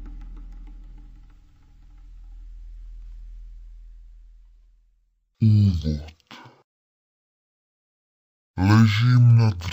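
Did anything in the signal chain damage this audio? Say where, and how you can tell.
Yes. Stereo read as mono runs throughout the clip, from start to finish, introduced where the file's channel layout is interpreted, at the sample-format conversion or playback stage. Everything plays at half speed and sits a full octave, 12 semitones, below where it should. Interleaved left and right samples are being taken as consecutive samples of one channel, doubling the number of samples. That also leaves a fainter mirrored copy of the sound in the upper half of the spectrum.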